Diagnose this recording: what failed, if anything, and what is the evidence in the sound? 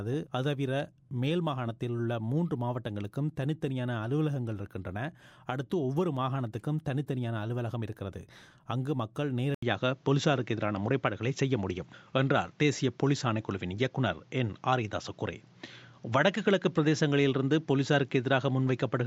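At 9.55 s the sound cuts out for 80 ms, then returns duller and boxier. From there, nothing remains above 7.5 kHz. The level shifts by about 5 dB, with new noise roughly 40 dB down. Likely cause: input switched to a poorer device, at driver level.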